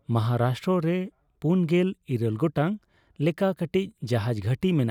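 No technical faults can be heard anywhere in the speech recording. Nothing in the sound points to a problem with how it was captured, processed or delivered.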